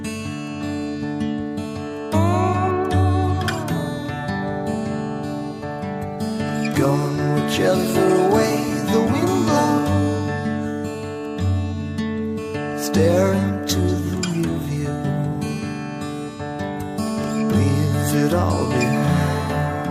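No dropouts, clicks, distortion or level jumps turn up anywhere in the recording.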